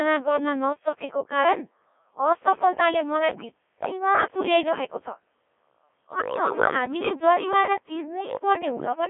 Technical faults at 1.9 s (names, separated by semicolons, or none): Codec 2 vocoder